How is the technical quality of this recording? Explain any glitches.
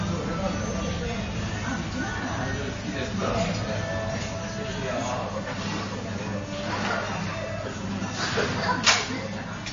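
Quality is poor: MP3 compression damage is plainly audible for the whole clip, and the likely cause is heavy encoding at a low bitrate, roughly 31 kbps. Nothing is present above 7.2 kHz, and weak frequency components flicker between frames, giving a watery, swirly texture with smeared attacks. A simple low-pass filter would dull the treble without that swirling.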